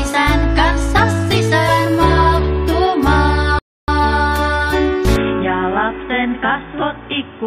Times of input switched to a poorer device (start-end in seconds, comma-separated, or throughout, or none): 5.16-7.47